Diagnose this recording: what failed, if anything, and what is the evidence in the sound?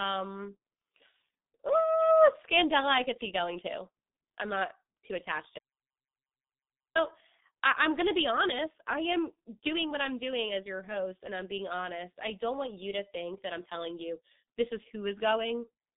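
The codec stage fails throughout the clip. The speech is band-limited to roughly 150 Hz to 3.7 kHz, with nothing above 3.8 kHz, and the codec damage is heavy: muffled, hoarse voicing and smeared consonants. That signature matches G.723.1 at a rate that fits its 6.3 kbit/s mode. Its 30 ms frames and slowly updated vocal model cannot follow fast articulation, so transients blur and the voice takes on a rough, hoarse texture.

An audio dropout to silence occurs from 5.59 s to 6.95 s, about 1.37 s, starting right after "not too attached to". The signal drops to silence, with no room tone or codec noise underneath, and speech resumes abruptly at the end of the gap. The likely cause is a lost input or link upstream, such as a disconnected device or brief mute, while the recording chain kept writing silence. Whatever was spoken during that span is unrecoverable.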